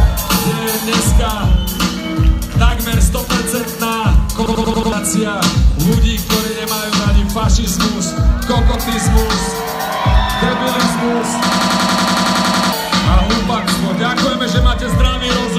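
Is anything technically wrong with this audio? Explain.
Yes. A system hang loop at 4.46 to 4.92 s and 11.52 to 12.73 s: a stalled system kept replaying one 92.9 ms buffer, likely 4096 samples, giving a 10.8 Hz machine-gun stutter and losing about half a second, then a second, of audio.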